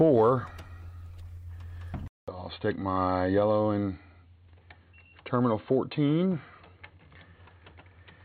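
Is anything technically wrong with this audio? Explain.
Yes. At 2.08 s the sound drops out for about 200 ms. When it returns it is dull and boxy, with nothing above 4.3 kHz, and it stays that way to the end. The level is about the same, and a faint new background noise sits far below the signal. This is likely an input switched to a poorer device. The recording chain changed its input partway through, and the new device passes a narrower band.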